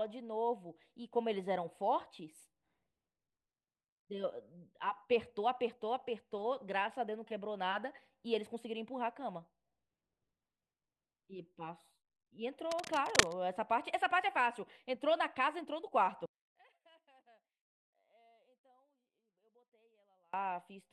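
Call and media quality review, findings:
Scratching, rustling burst over the speech, 12.65 to 13.33 s, roughly as loud as the speech itself. Cable scratch noise, likely a worn cable, connector or control being moved, its contact resistance fluctuating rapidly and injecting dense, irregular noise.

Speech collapses to a faint residue from 16.26 to 20.33 s, down about 37 dB on mono playback. One channel inverted, likely a polarity flip on one stereo leg, so the shared centre content cancels when summed.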